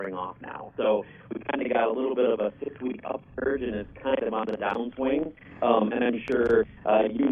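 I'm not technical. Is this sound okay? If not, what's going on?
No. Throughout, there is a channel delay (doubling): one side arrives about 43 ms late, so everything sounds doubled, like a quick slap echo.

Loud pops appear at 4.49 to 4.73 s and 6.28 to 6.49 s, each a quick double pop, the second louder. They likely come from a plug, switch, or static.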